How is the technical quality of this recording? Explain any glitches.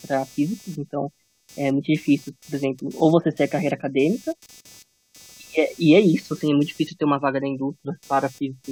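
The main problem is a buzz of computer activity noise under the speech for the whole recording. It's a pulsing buzz with a rate of around 300 Hz, sitting roughly 30 dB below the speech. It changes with whatever the machine is doing, not with the speech. Load swings in the processor, graphics card or even mouse movement push current around the shared ground, and the audio circuit picks that up as a buzz or chirp.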